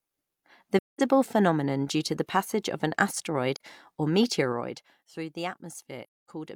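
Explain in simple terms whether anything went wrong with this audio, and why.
Yes, the speech drops out three times from AAC frame loss with muting: at 0.78 to 1.01 s just before "phenomenon due to the", briefly at 3.56 to 3.60 s, and at 6.03 to 6.30 s after "through the". Missing frames were silenced, leaving soft-edged gaps.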